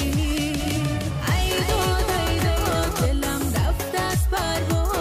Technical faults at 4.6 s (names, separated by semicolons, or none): none